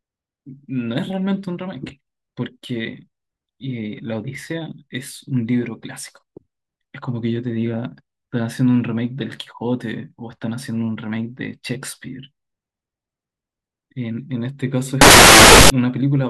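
From 15.01 s to 15.70 s the speech gives way to a burst of loud, harsh broadband noise, the sign of samples built from the wrong bytes. The reader has put each sample's bytes together wrongly, so the rapidly changing low bits end up as the large part of each value.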